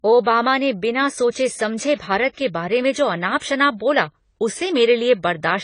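From start to finish the speech sounds dull and smeared, with nothing above 10 kHz and a warbling, fizzy texture on sibilants and held sounds. This is likely AAC compression, AAC-LC at a low bitrate, which fits roughly 24 kbps, where coarse quantisation lowers the cut-off and thins the spectrum.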